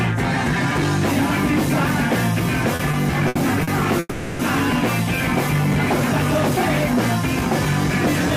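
Repeated stalls (stutter) run from 2.75 to 3.69 s: five short gaps, the longest 70 ms, totalling 180 ms. Packets arrived later than playback needed, so the buffer kept emptying and the last sound was stretched to fill each hole. The sound drags and hiccups, but nothing is lost.

A call audio freeze follows from 3.99 to 4.41 s, a single 400 ms hold where the last sound is extended as a fading buzz, ending in a brief moment of near-silence. The cause is likely packets delayed in transit, leaving the buffer empty. When playback resumes, it picks up where it stopped, about 400 ms later than before, with nothing missing.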